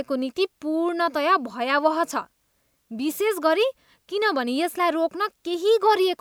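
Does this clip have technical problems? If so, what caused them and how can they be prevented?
No, the speech signal has no technical faults to trace to a cause or to prevent.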